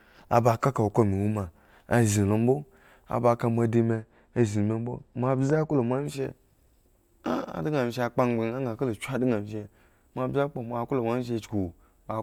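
From 3.75 to 6.06 s, just after "azinlombo aba ka moa", the speech turns dull and muffled. This is de-emphasis applied wrongly. A treble cut was applied where no pre-emphasis existed, or was applied twice. The response slopes smoothly downward, reaching about 10 dB down at 10 kHz relative to 1 kHz.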